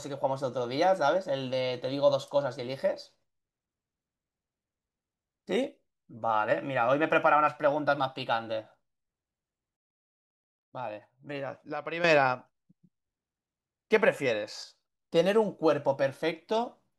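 At 9.77 s, speech and background noise drop by about 12 dB in one step, recovering at 12.04 s. A shorter dip of about 6 dB runs from 14.64 to 14.93 s. These sudden gain jumps likely reflect gain changes applied without a ramp. Unlike a fade, there is no slope.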